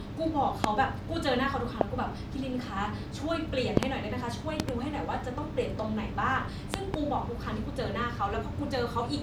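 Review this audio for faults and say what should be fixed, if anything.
Loud pops at 0.64–0.66, 1.81–1.83, 3.77–3.85, 4.60–4.71 and 6.74–6.96 s, the last three as double pops, peaking roughly 20 to 25 dB above the speech, which continues underneath. These are likely voltage transients from a plug, switch, static discharge or driver glitch. Secure connections, avoid switching or handling equipment while recording, and keep audio drivers stable.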